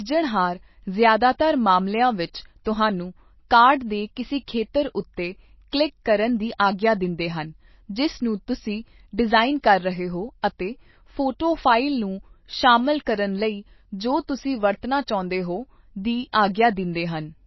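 Speech clip, likely squeezed through MP3 compression at a very low bitrate in the region of 24 kbps, so the encoder drops everything above 5.8 kHz and switches weak frequency lines on and off frame to frame, leaving the speech dull, watery and swirly throughout.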